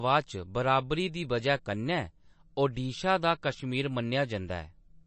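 Speech, with MP3 compression audible throughout: the sound is watery and swirly, and nothing exists above 8.3 kHz, which fits a low bitrate of roughly 34 kbps. A spectrogram would show a flat ceiling at 8.3 kHz and speckled, flickering patches where weak components are likely being zeroed from frame to frame.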